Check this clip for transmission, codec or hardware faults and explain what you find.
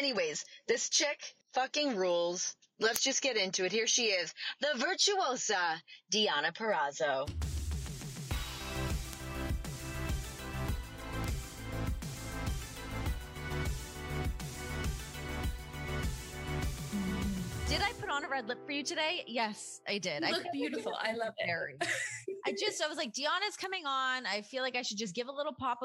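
Four bit error spikes are present, at 2.96 s, 9.13 s, 11.24 s and 23.64 s. In each, a single flipped bit in memory or on a digital link shifted one to three consecutive samples by a power of two before the value snapped back. The result is an isolated, broadband tick unrelated to the surrounding sound. The first, reaching about -6 dBFS, is the loudest. Those at 9.13 s and 11.24 s peak near -18 dBFS, and the last is fainter at about -24 dBFS.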